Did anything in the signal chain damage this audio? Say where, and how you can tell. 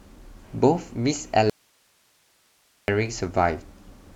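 Yes. The wanted signal was likely lost at an intermittent analogue connection while the stage after it stayed live, causing an audio dropout to a faint residue. From 1.50 to 2.88 s the speech cuts out abruptly for about 1.38 s. Only hiss remains, around 40 dB below the signal.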